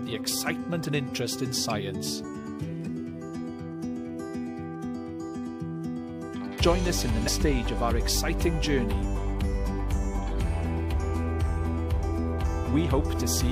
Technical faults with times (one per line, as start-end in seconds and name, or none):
2.23 compressed frames skipped
7.27 compressed frames skipped